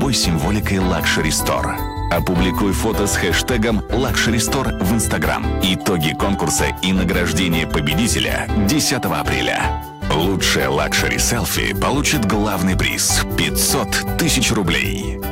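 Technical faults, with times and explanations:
Throughout, hard clipping: the signal arrives about 9 dB hotter than the stage it passes through can carry, so every peak that exceeds the limit is sliced flat, affecting somewhere around 7 percent of the samples. Those squared-off tops generate a spray of high harmonics that were never in the original sound, so each loud moment carries a harsh, gritty fuzz, with crackle riding on the strongest peaks across the whole clip.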